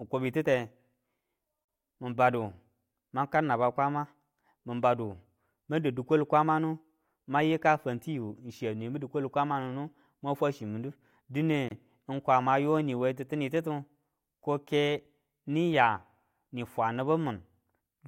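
At 1.65 s and again at 11.68 s, ten seconds apart, the speech drops out for about 39 ms and 27 ms: a gap at a join of encoded pieces. Encoder start delay and final-frame padding were left untrimmed, leaving silences with smeared edges before the audio resumes.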